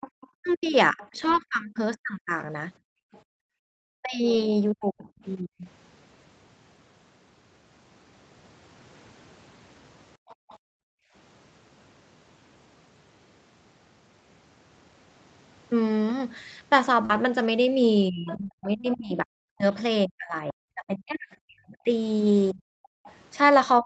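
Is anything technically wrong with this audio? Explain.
Yes. Several call faults are audible, mostly echo-canceller trouble and packet loss.

Other side's voice leaking through, from 0.01 to 3.21 s, 10.28 to 10.58 s, 18.27 to 19.74 s and 23.06 to 23.13 s. A faint second voice sits under the talker, roughly 15 to 30 dB lower. It is likely loudspeaker echo the canceller missed.

Speech suppressed in double talk, from 0.35 to 5.64 s and from 18.10 s to the end. The talker's voice dips, by up to about 40 dB, and breaks up. This is likely the canceller turning everything down while both sides talked.

Lost packet rebuilt from error correction, at 1.19 to 1.33 s, 2.39 to 2.41 s, 4.33 to 4.39 s, 17.09 to 17.16 s, 18.38 to 18.48 s and 22.50 to 22.60 s. There are no gaps. Low-bitrate backup copies filled in, so these moments sound briefly rougher and noisier.

Background gated by the echo canceller, from 2.79 to 3.73 s, 10.17 to 11.13 s and 22.95 to 23.06 s. 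The room sound drops out, by about 40 dB, while the loudspeaker plays. It returns when the canceller lets go.

Short concealed packet loss, from 17.05 to 17.12 s. About 40 ms never arrived in time. The receiver extended the previous sound, which leaves a brief smear.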